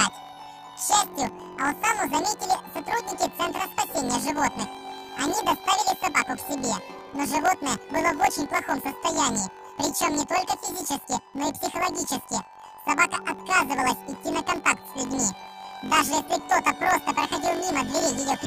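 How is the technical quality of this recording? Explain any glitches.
The technical quality is poor. One fault runs through the whole recording.

Planar audio read as interleaved, throughout: each block of left samples followed by right samples is read as alternating pairs. Each block plays twice at double speed, so the sound sits an octave high with a buzzing flutter at 46.9 Hz, the rate of its 21.33 ms blocks. That fits a 1024-sample block.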